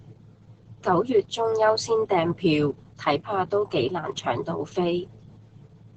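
Opus voice compression runs through the whole clip. The coder has worked in its speech-only linear-prediction mode at wideband, so nothing survives above about 8.3 kHz, and the excitation between predictions has been coded coarsely, which fits a bitrate around 10 kbps. The damage is heavy. The speech sounds muffled, with a hoarse, slightly robotic grain.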